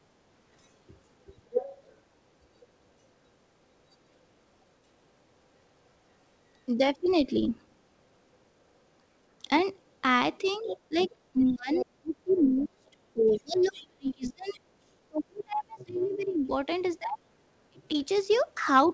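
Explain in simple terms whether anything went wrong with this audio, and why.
Yes, two problems can be heard. The first is the other side's voice leaking through: a second voice appears at 1.51–1.77, 6.99–7.13, 9.6–9.64, 10.68–12.46, 13.3–14.6, 15.38–16.91 and 17.8–18.93 s. It is likely echo from a loudspeaker that the echo canceller didn't fully remove. The first burst is fairly loud, the one at 10.68–12.46 s is also fairly strong, and the rest are faint.

The second is speech suppressed in double talk. Between 10.6 and 17.94 s the main talker's voice sinks sharply or drops out in pieces, for about five seconds in total. The likely cause is that both sides talked at once and the canceller turned everything down. Unlike the leak, nothing extra is added here. The main voice itself goes missing.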